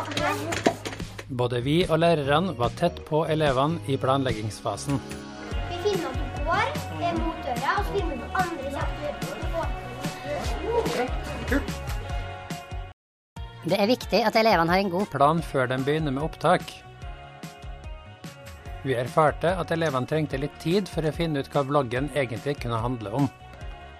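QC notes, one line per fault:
12.92–13.36 s, playback stall: the sound halts mid-flow and the output drops to silence for about 0.44 s before resuming. This is most likely the player running dry of buffered data or its output thread being blocked. It differs from a dropout or gap in the recording because the silence is a clean, complete stop with no attenuation or fade. Right after it, the sound catches up faster, showing the player fell behind rather than losing material.
13.36–15.14 s, catch-up at higher speed: immediately after the stall the sound runs at 1.25 times normal speed for about 1.8 s, then returns to normal. The player is resampling its backlog to recover the time lost during the stall, so pitch rises along with tempo, by roughly four semitones. That coupled rise in pitch and tempo separates it from time-stretching, which keeps pitch fixed, and from a tape-style speed drift, which wanders gradually.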